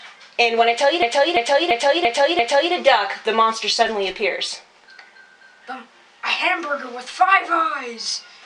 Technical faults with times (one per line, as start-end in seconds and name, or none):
1.02-2.73 system hang loop